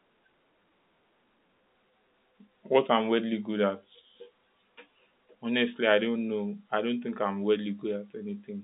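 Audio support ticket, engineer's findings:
No faults found; telephone-band speech, G.711 path normal.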